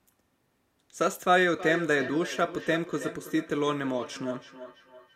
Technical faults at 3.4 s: feedback echo between two devices

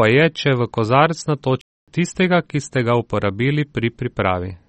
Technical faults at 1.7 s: MP3 compression; playback stall

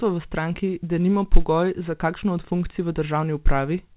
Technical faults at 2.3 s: none

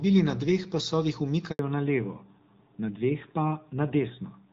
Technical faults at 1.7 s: fallback to narrowband

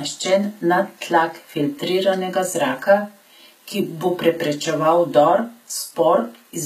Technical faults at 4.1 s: HE-AAC compression

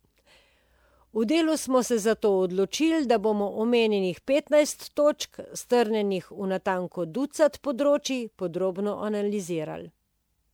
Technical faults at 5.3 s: generation loss

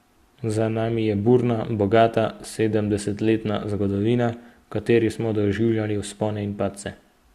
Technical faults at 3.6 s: none

